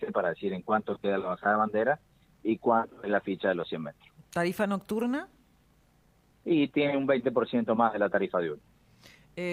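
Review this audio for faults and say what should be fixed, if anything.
Nothing in this audio needs fixing, as there are no faults to report.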